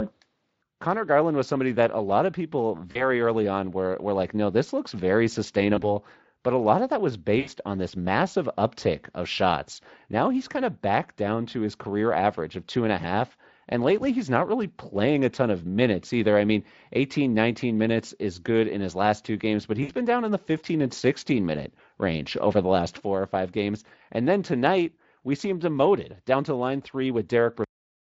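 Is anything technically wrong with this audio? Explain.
Yes, two problems. First, VoIP packet loss concealed by the speech codec, around 2.91–3.09 s, 5.75–5.83 s (between "no this looks very" and "but a lot of"), 7.39–7.49 s (between "lot of that was" and "on this massive uptick"), and 19.83–19.91 s. The gaps sound like roughly 40, 20, 80 and 60 ms of missing audio. The decoder fills each gap by stretching its last pitch and filter and fading the gain, so you get a brief buzzy, fading smear. The voice stays a bit weak for a moment after each one.

Second, a cut-off end at 27.64 s, right after "down to line three". The final stretch of buffers never got written, so the sound stops mid-utterance and drops straight to digital silence with no natural decay. The Speex coding underneath adds only a light hoarseness.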